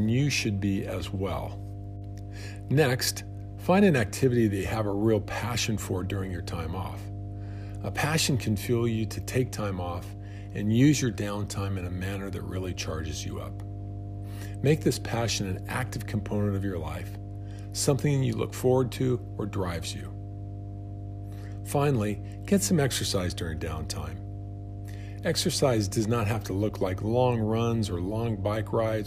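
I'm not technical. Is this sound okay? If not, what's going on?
No. There is mains hum running under the speech from start to finish: a steady, low droning tone at 50 Hz, fairly loud compared with the talking. It happens when electricity from the power supply leaks into the recording, often through a ground loop or a nearby transformer. Unlike hiss, which is a soft rushing noise spread across all pitches, this is a single deep note that stays exactly the same the whole time.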